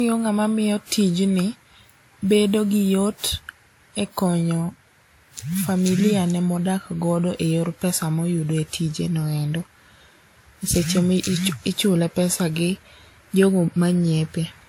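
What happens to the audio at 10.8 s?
At 10.8 s the speech has that swirly, smeared, hollow quality of generation loss, which runs through the whole clip. It's likely from about five rounds of lossy encoding, pointing to WMA near 96 kbit/s, each pass stacking fresh quantisation noise and blurring attacks, even with content still reaching 20.1 kHz.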